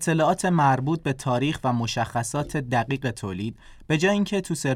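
Nothing in the speech here stands out as a technical fault, so there's nothing to flag.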